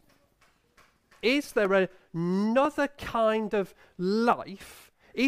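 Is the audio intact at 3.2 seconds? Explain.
Yes, the speech at 3.2 seconds plays through intact, with no fault at that moment.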